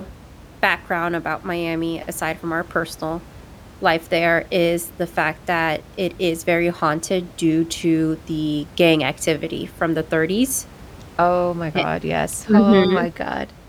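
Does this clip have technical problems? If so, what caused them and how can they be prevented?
No, the speech signal shows no technical problems, and the room's background noise sits about 22 dB below the speech as part of the recording itself.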